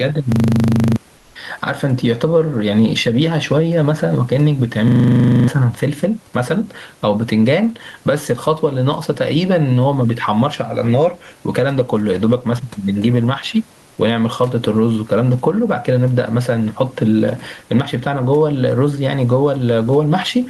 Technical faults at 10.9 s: gain pumping

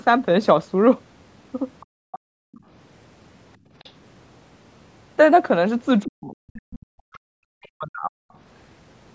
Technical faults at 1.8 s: other side's voice leaking through; background gated by the echo canceller

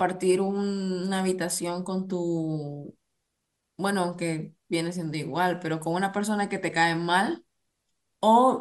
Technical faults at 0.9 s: none

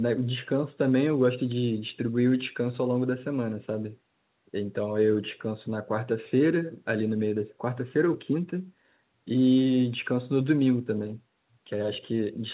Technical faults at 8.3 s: none

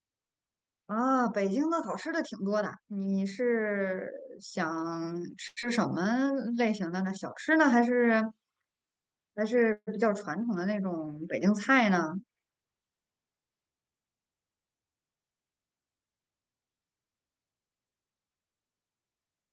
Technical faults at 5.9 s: jitter buffer slow-down

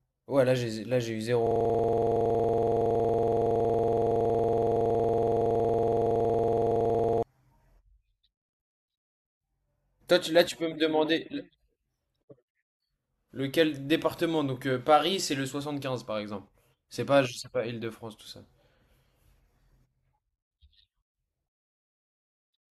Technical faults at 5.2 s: system hang loop

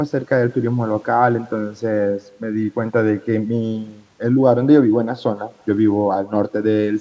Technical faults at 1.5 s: echo with no canceller

